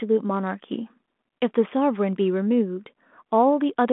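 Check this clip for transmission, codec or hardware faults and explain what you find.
Nothing here points to a transmission, codec or hardware fault, so there's nothing to flag in this one.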